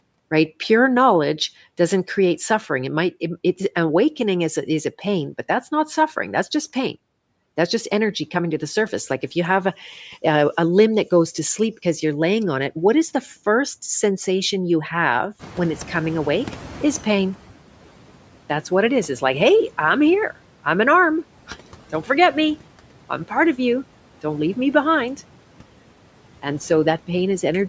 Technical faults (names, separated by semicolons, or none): noise suppressor catching up